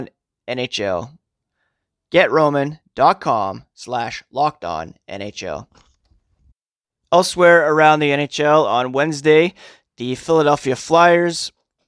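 No faults detected anywhere in this speech recording.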